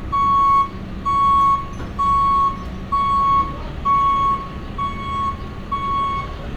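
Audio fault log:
Nothing stood out on listening to this recording of sounds.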